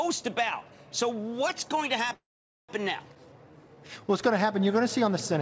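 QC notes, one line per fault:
2.14–2.71 s, call audio freeze: the sound stops and the last moment trails on as a brief fading buzz, then drops into roughly 0.47 s of silence before resuming exactly where it left off, so the clip gains about 0.55 s and nothing is lost. This is likely a delivery stall: packets held up in transit, the jitter buffer draining dry, and the receiver stretching its last audio until fresh data arrived.
3.15–3.17 s, skip ahead: playback lurches forward with almost no gap, only a tiny join of under a hundredth of a second, and roughly a tenth of a second of sound is simply gone, the two sides butted together. Dropping that stretch pulled the delay back down by about the same amount.
3.20–4.02 s, jitter buffer slow-down: the sound runs slow at unchanged pitch, about 86% of normal speed, with drawn-out stretches. Across these 0.82 s some 119 ms is added by repeating single pitch periods and slivers of pauses over and over, as the buffer rebuilds its reserve. 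Underneath, the call codec's band limit leaves nothing above 8 kHz, consistent with G.722.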